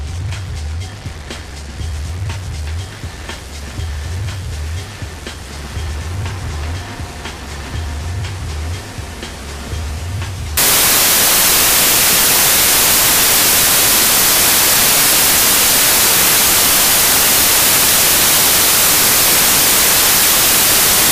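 The audio turns into loud, harsh broadband noise from 10.57 s to the end. These are samples built from the wrong bytes. Misassembled bytes push the low bits to the top of each value.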